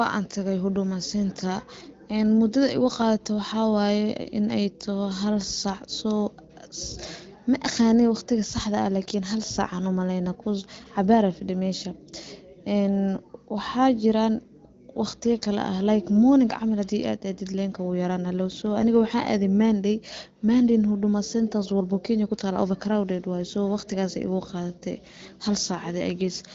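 Nothing's wrong with this speech recording; it simply comes through the AMR wideband (HD Voice) codec at 15.85 kbit/s, so there's no content above about 7.6 kHz.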